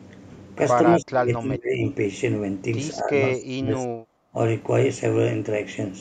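The speech dips sharply at 0.96–1.85 s, 3.34–3.94 s and 4.12–4.35 s, with a milder dip at 2.98–3.15 s, sometimes nearly vanishing. This is likely speech suppressed in double talk: an echo canceller unable to separate near-end speech from overlapping loudspeaker echo and attenuating both.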